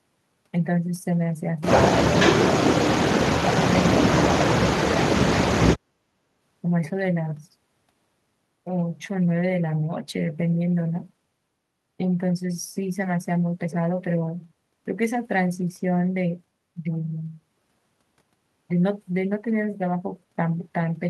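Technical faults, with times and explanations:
4.75 to 5.56 s, speech suppressed in double talk: the speech drops sharply, by around 40 dB at its deepest, for roughly 0.7 s in total. This is likely an echo canceller that heard both sides at once, could not separate this talker from loudspeaker echo, and attenuated everything.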